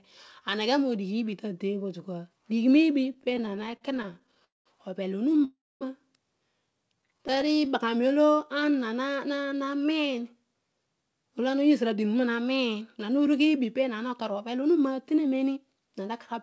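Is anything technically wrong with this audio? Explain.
Yes. The speech has several buffering faults. Nothing above 8 kHz remains, which fits a G.722 call codec.

Repeated stalls (stutter) appear from 3.14 to 4.43 s and again from 7.02 to 7.68 s. Late packets kept emptying the jitter buffer. Many brief gaps, up to 44 ms, are filled with stretched sound, so the speech stutters.

Call audio freeze occurs from 4.44 to 4.68 s and from 5.44 to 5.83 s. The likely cause is packets held up in transit. The sound fades out, then resumes where it stopped.

Jitter buffer slow-down runs from 6.95 to 10.13 s. Repeated pitch periods add about 325 ms, so the speech plays at 90% speed without changing pitch.

Jitter buffer speed-up runs from 11.58 to 16.34 s. Removing short pitch periods trims roughly 0.4 s, so the speech sounds hurried at 108% speed.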